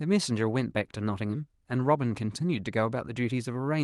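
No technical faults can be heard anywhere in the speech. It has passed through a WebRTC call path that is working normally, and the highs stop at about 12 kHz, which fits the bandwidth of an Opus call codec.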